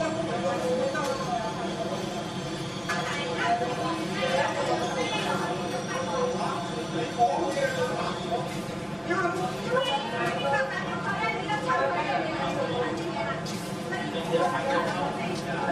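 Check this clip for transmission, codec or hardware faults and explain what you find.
There is one fault, channel delay causing comb filtering, and it runs through the whole clip. One channel arrives around 5 ms after the other, and when the two are summed to mono, the content they share cancels at evenly spaced frequencies. The first notch falls near 100 Hz, with further notches every 200 Hz or so above it. The sound comes across hollow and phasey. On a spectrogram this shows as fixed horizontal dark bands. The waveform looks normal.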